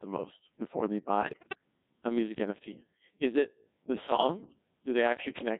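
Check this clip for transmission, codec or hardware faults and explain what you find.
Two faults are present: the whole clip has passed through a very low-rate vocoder, and two short stretches are corrupted by bit errors.

Codec 2 vocoder, throughout, at 1.6 kbit/s. The encoder sends only pitch, voicing, energy and a coarse spectral envelope for each frame. The decoder rebuilds the speech from a bank of sine waves rather than the original waveform. The damage here is heavy: the speech sounds robotic and buzzy.

Bit errors on digital voice radio, from 1.21 to 1.58 s, just after "the most before they" and before "a music", and again from 4.12 to 4.46 s, after "it the". At this bitrate every bit steers the pitch, level, voicing or spectrum of a whole frame, so corrupted bits throw each affected frame off. The speech lurches in pitch and loudness and breaks into warbling, bleeping gibberish. 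The first burst is the heavier, with an error rate around 15 percent. The second suggests roughly half that.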